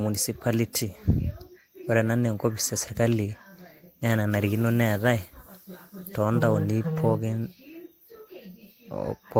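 No technical faults are audible anywhere in this recording.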